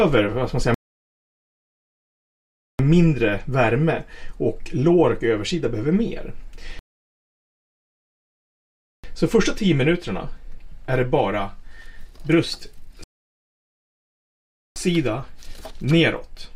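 Rebuffering stalls at 0.74–2.79 s, 6.79–9.04 s and 13.04–14.76 s: playback starves, drops to silence, then resumes seamlessly, adding about 2.0, 2.2 and 1.7 s.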